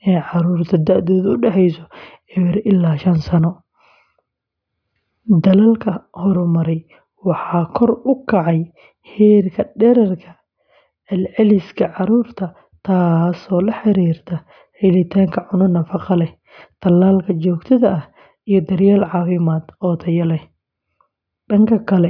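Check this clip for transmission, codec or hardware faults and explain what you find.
No transmission, codec or hardware fault can be heard anywhere in the speech; the signal stays continuous and stable throughout.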